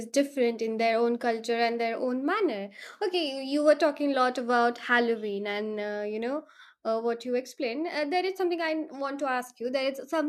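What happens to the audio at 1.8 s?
Nothing goes wrong at 1.8 s; the speech carries on intact through that moment with no dropout, click or distortion.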